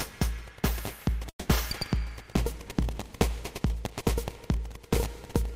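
An everyday-sound recording with a long network dropout from 1.29 to 1.49 s, likely packet loss. The last sound smears into a fading buzz, then about 80 ms of near-blank spectrogram before audio resumes.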